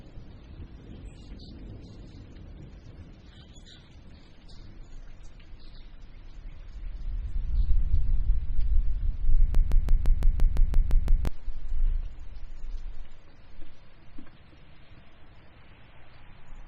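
A broken-record loop runs from 9.55 s to 11.27 s: a 0.17 s fragment of the sound repeats exactly, back to back, ten times. Playback likely stalled and kept resending its last held fragment, so the audio belonging to that stretch is lost.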